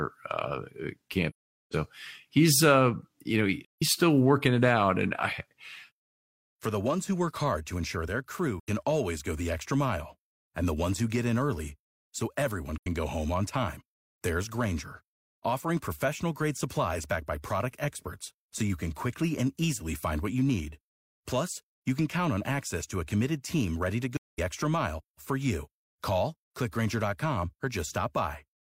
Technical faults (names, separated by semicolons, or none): AAC frame loss with muting